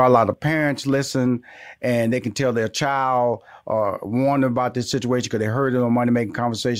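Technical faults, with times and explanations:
0.34 s to 6.80 s, one channel drops out. Right after "a lot", the speech falls abruptly by about 6 dB and stays low to the end. The change is a sudden step, not a fade. The likely cause is one side of a stereo feed going silent. Summed to mono, the shared content then gets only half its former contribution, which is a 6 dB fall. Anything carried only on the lost side vanishes entirely.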